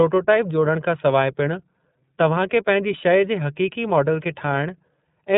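From start to finish the speech sounds boxed-in and slightly buzzy, with a rough, synthetic edge on every syllable and nothing bright above 4 kHz. That is the iLBC codec at work, a narrowband VoIP coder whose damage here is plainly audible. Working in 30 ms frames at 13.33 kbps, it codes each frame's excitation on its own without drawing on the previous one, which gives the voice its coarse, artificial texture.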